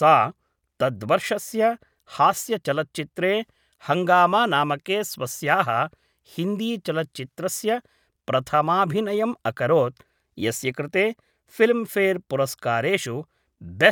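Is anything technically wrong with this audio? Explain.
No, nothing in this recording stood out as a technical problem on listening.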